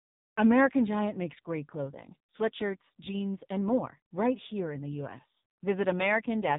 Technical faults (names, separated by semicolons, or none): AMR narrowband mobile codec